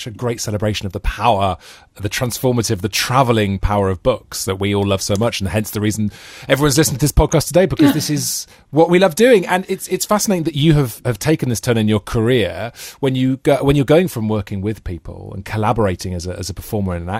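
At 7.32 s, right after "everyone's listening to this", there's a quick DAB burble: weak-reception bit errors scramble a few frames, giving brief blips of noise in single sub-bands.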